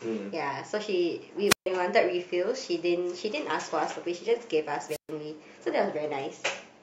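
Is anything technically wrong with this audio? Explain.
Yes. At 1.47 to 1.67 s and 4.88 to 5.11 s there is a wireless microphone squelch dropout: the radio link weakens until the receiver's squelch gate shuts, so hiss rises briefly, then the speech cuts to near silence for about 137 ms and 128 ms before returning.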